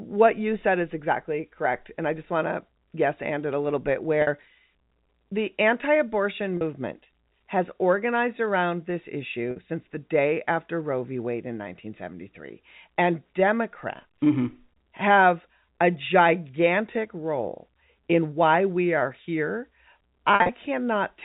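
Packet loss with pitch repetition hits at 4.22, 6.57, 9.51 and 14.14 s, then scattered across 20.33 to 20.49 s. The receiver loops the last pitch period over 10 to 50 ms gaps, giving brief buzzy, held-note blips.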